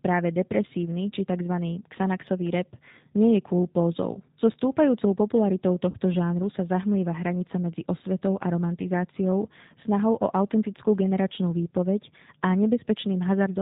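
Speech, and it has the G.729 codec sound all the way through: slightly rough and synthetic, with nothing above 4 kHz. That fits G.729A at around 8 kbit/s, which rebuilds the sound from a vocal tract filter, a pitch guess and a few pulses per frame. There's also VoIP packet loss concealed by the speech codec at 4.13 to 4.20 s and 5.90 to 5.98 s. About 20 ms, then 40 ms, go missing (likely one packet, then two), and the decoder stretches the last sound into a fading buzzy tone or coloured noise that stays a bit weak after the gap.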